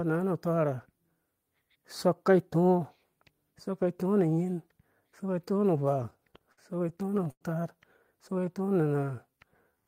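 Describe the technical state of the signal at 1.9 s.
At 1.9 s the signal is intact, with no audible fault at that point in the speech.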